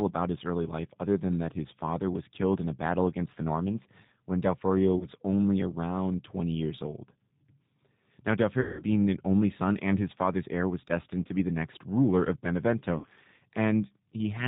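Throughout, the speech carries the G.729 codec's damage: an 8 kbit/s model rebuilds each 10 ms frame from a filter, pitch predictor and a few pulses, so the sound is plainly rough and synthetic, with nothing above 4 kHz.

VoIP packet loss concealed by the speech codec occurs at 4.99–5.07 s, 8.61–8.83 s and 12.98–13.07 s, covering 20, 180 and 60 ms of missing audio. The decoder stretches its last frame into a fading buzzy tone or coloured noise, longest at 8.6 s, and recovery stays weak briefly afterwards.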